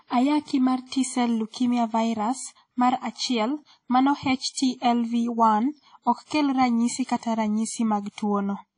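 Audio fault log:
throughout: WMA compression. The speech carries plainly audible transform-codec damage, and the likely cause is a WMA encode at a low bitrate, consistent with something around 32 kbps. Nothing is present above 10.1 kHz, so the top octave is cut away and sibilants lose their edge. Quantisation noise smeared across long transform blocks gives a ringing, washy texture, with a hiss that rises and falls with the level of the speech.
4.53 to 4.56 s: pre-echo. A short burst of hiss, about 31 ms long, arrives just ahead of a sharp onset in the speech. The attack landed late within a transform block, and the codec spread that block's quantisation noise evenly across its full length. Noise scaled for the loud onset therefore spills into the quiet stretch before it, so the transient sounds softened and smeared rather than crisp.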